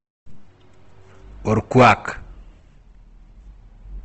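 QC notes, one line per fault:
throughout, Opus compression: the speech has a grainy, rough texture and nothing above 8.2 kHz. This is likely low-bitrate Opus in music mode, around 16 kbps, filling starved bands with noise. A spectrogram shows a hard ceiling at 8.2 kHz with speckled, noisy upper bands.
1.78–1.92 s, hard clipping: the signal is driven about 8 dB past the stage's limit, so its peaks are sheared flat, adding harmonics far up the spectrum. The waveform shows squared-off tops; a spectrogram shows broadband harmonic smear reaching the upper limit.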